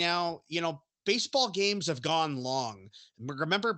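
No technical faults can be heard in this speech; it carries the mild coding texture of a call codec, with the top end rolled off above about 8 kHz as a wideband call path would leave it.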